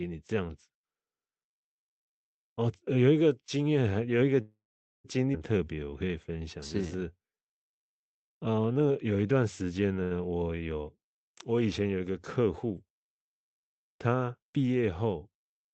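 At 4.41 s the speech hangs. The last sound carries on as a fading buzz, then drops out into silence for most of the gap before the audio picks up again at 5.06 s, exactly where it left off. That's the call audio freeze, likely from packets stuck in transit while the jitter buffer ran dry. The receiver papered over about 0.63 s, roughly 0.47 s of it dead quiet. Nothing was lost, but everything after it now runs that much later.

Barely a quarter-second later, at 5.32 to 5.35 s, there's a skip ahead. With that backlog waiting, something like 0.4 s of audio was dropped and the two sides were stitched together with only a tiny 10 ms fill. So you hear an abrupt jump where a chunk of speech simply isn't there, and the two sides are joined almost directly.

From 5.58 to 8.94 s there's a jitter buffer slow-down. The receiver was building its reserve back up by repeating single pitch periods over and over, which stretched that stretch by about 0.36 s. 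Playback sits at about 90% speed with the pitch unchanged, so syllables sound drawn out and a little lazy.

At 10.03 s comes a short stall from a late packet. One packet wasn't there on time, so the receiver held the current sound for about 77 ms until it arrived and then carried on from the same spot. It comes across as a sound lingering a touch too long with a slight buzzy dip, and nothing is missing.

Then from 13.76 to 14.57 s there's a jitter buffer speed-up. The buffer had more queued than it wanted, so it snipped out short pitch-period pieces in quick succession, dropping roughly 70 ms in total. Speech runs at about 107% with the same pitch, and that phrase sounds slightly rushed.

Underneath all of it sits the Opus call path, with its usual coding noise and the top end cut off around 8 kHz.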